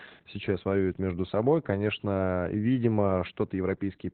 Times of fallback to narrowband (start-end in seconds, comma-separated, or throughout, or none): none